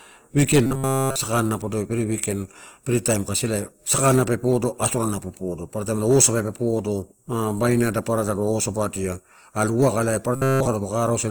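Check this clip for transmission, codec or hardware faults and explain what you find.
There are two problems here: codec damage across the whole clip and two brief robotic patches.

Throughout, the speech sounds grainy and rough, likely Opus compression in music mode at a low rate, around 24 kbps, filling starved bands with noise.

From 0.66 to 1.16 s, just before "sakana podoi", and again from 10.36 to 10.68 s, it turns into a rigid metallic buzz at 134 Hz. That's robotic sound from repeated short buffers: a roughly 7.5 ms slice is likely looped in place of essentially all the real audio.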